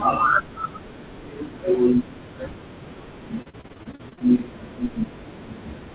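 Speech over a narrowband call line with nothing above 4 kHz. From 3.42 to 4.22 s, repeated packet loss leaves about a dozen short holes, none longer than 40 ms. Each is patched by extending the previous sound, which makes the speech sound robotic and choppy rather than dropping into a single clean silence.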